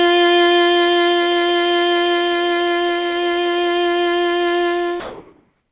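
From 5.0 s to 5.71 s the background turns into a flat, featureless hiss that shifts about 2 dB in level. This is likely comfort noise in place of the background, generated while transmission paused.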